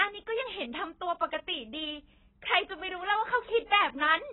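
AAC compression throughout: speech sounds dull and smeared with a fizzy warble, and nothing above 4 kHz, likely from heavy AAC-LC coding at around 16 kbps.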